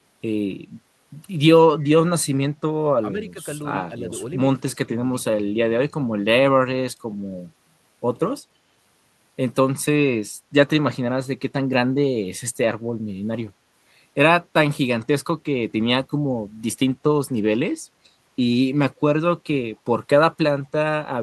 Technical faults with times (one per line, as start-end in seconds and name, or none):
1.80-1.84 echo leak
3.03-3.39 speech suppressed in double talk
4.60-5.24 speech suppressed in double talk